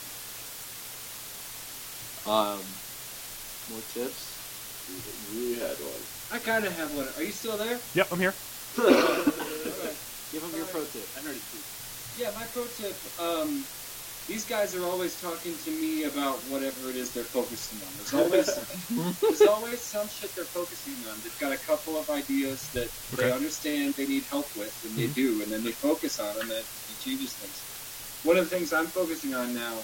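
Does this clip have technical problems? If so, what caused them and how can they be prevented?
Yes. Low bit depth with dither runs throughout, consistent with about 6 bits; dither before rounding turns the error into a steady, even hiss only about 10 dB below the signal, without distortion. Prevent it by recording and exporting at 16 or 24 bits.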